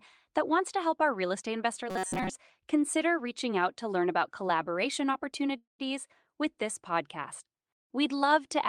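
From 1.9 to 2.3 s, new audio likely arrived too seldom, so short buffers were replayed in place of most of the speech, producing robotic sound with a rigid 188 Hz buzz. At 5.57 s, a call audio freeze, likely from delayed packets emptying the jitter buffer, fills 216 ms with fading sound that ends in 140 ms of silence before speech resumes, now 216 ms later, with nothing lost.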